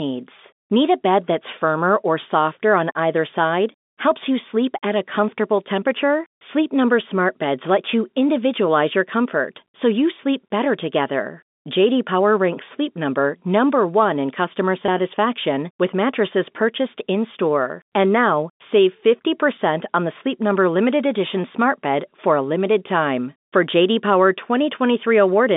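Packet loss with pitch repetition occurs from 14.86 to 14.88 s in this speech recording, which comes over a G.711 telephone line limited to roughly 200 Hz to 3.6 kHz. About 20 ms of audio is missing, which fits a single lost packet. The receiver filled the hole by repeating the last pitch period of the preceding sound, so the gap comes across as a brief, slightly held buzz rather than a dropout before normal speech resumes.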